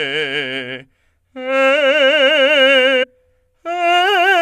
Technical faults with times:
3.02-3.04 compressed frames skipped

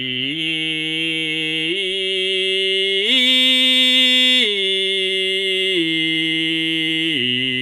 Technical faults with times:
none

